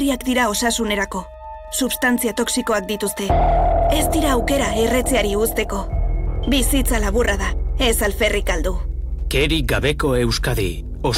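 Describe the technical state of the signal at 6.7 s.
Wi-Fi interference runs through the whole clip, including 6.7 s. A nearby radio's beacon, rectified every 102.4 ms, gives faint steady ticking, roughly 45 dB below the sound.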